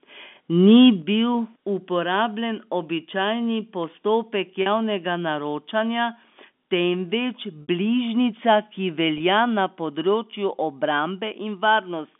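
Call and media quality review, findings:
Microphone overload, 0.67–0.88 s: harsh crackle on loudest peaks, about 2 dB over, roughly 2% of samples. Likely input gain too high. Waveform shows flat-topped peaks; spectrogram shows broadband smear.

Microphone volume stepped down, 1.02 s: sudden drop of about 6 dB in voice and background right after the clipped peak. Likely automatic input-gain control. The waveform envelope shows a single clean step.

Packet loss with pitch repetition, three gaps bridged by a repeated pitch period. At 4.62 s, 40 ms after "uporabljen običajni postopek", a held buzzy tone. At 7.62 s, 60 ms that fades toward silence before a cross-fade back in. At 9.18 s, 20 ms just before "na področju". Each gap fits whole 20 ms packets. The spectrogram shows frozen harmonic striations.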